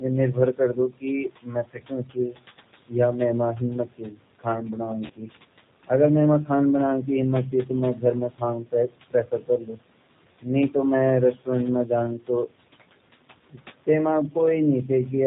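Throughout, the speech has a rough, slightly synthetic, band-limited quality with nothing above 4 kHz, and the damage is plainly audible. These are G.729 codec artefacts, consistent with an 8 kbit/s G.729A stream that rebuilds each frame from a vocal tract filter, a pitch predictor and a few pulses.

Also throughout, the background swells under the talking and sinks in the pauses. These are noise suppressor artefacts: the suppressor turns down, frame by frame, every band it judges to be steady noise, so the residue pumps rather than staying level. The room noise underneath sits about 17 dB below the speech.

From 0.00 to 2.94 s, parts of the speech sound swallowed, falling by up to about 19 dB, for roughly a second and a half in total. This is speech cut by the noise suppressor, which mistook those quieter parts of the speech for background and attenuated them along with it.

From 5.06 to 5.12 s, the speech smears briefly into a stretched, fading sound and stays weak just after. 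This is VoIP packet loss concealed by the speech codec. About 40 ms of audio went missing, which fits four lost 10 ms frames. The decoder stretched its last pitch and filter across the gap with falling gain, and it needed a moment to recover once packets returned.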